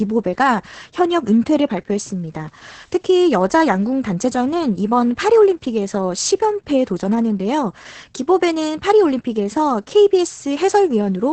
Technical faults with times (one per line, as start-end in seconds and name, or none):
0.00-11.32 Opus voice compression